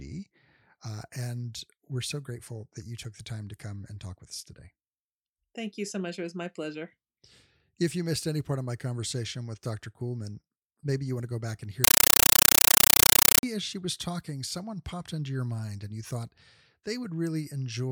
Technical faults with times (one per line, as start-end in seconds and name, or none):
11.84-13.43 compressed stream played as audio